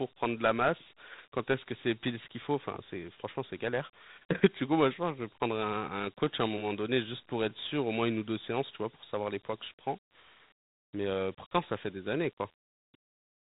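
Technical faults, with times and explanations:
Throughout, Dialogic VOX ADPCM: nothing is heard above 3.8 kHz, pointing to an 8 kHz sample rate. Each sample is coded as a coarse 4-bit step from the last, at what sounds like 32 kbps. The quantisation error leaves a plainly audible gritty hiss riding on the speech.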